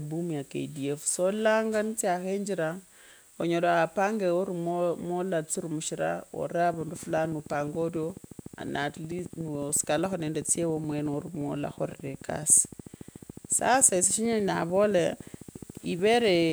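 From 6.74 s to 16.5 s a train of clicks runs under the speech: around 150 similar pops at a regular 13.8 per second, about as loud as the voice, ticking through pauses too, likely from electrical interference or a faulty connection or power supply. A spectrogram shows evenly spaced vertical lines; the waveform, regular spikes.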